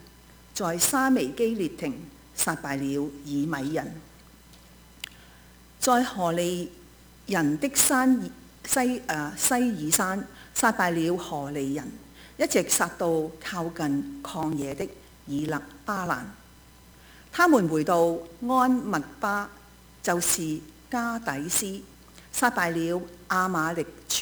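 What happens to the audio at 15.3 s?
At 15.3 s the audio sits inside a run of periodic USB or driver dropouts lasting from 14.43 s to 17.31 s. Something blocks the bus or driver every 0.096 s. Each time, roughly 4 ms of audio is skipped outright, so the waveform jumps ahead. About thirty such gaps fall in this span. They come across as an even train of ticks, about ten per second, heard only where sound is present.

Sample clock jitter also affects this moment, as it does the whole clip. The converter's clock wanders by around 10 microseconds, so each sample lands slightly early or late. The resulting error is strongest where the waveform changes fastest, sitting roughly 15 dB below the signal. It is heard as a gritty hiss that swells with loud, bright passages and vanishes when the sound stops.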